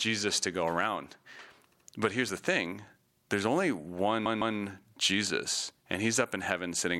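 Speech with two repeated-frames stutters, where stretches of compressed frames were played again. Just after "to go around", from 1.71 to 1.87 s, a 78 ms block plays twice more, adding about 157 ms. After "the thing there's only", from 4.25 to 4.56 s, a 157 ms block plays twice more, adding about 314 ms. On a spectrogram or waveform, each event shows the same short pattern copied side by side.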